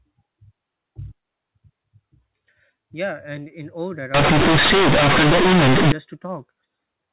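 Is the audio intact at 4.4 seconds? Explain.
No. Companded audio read as linear runs from 4.14 to 5.92 s: A-law telephone bytes are played as plain 8-bit samples without expansion, so every sign change throws the waveform across half its range. Quiet passages become as loud as peaks, giving harsh, buzzy distortion and heavy noise in pauses.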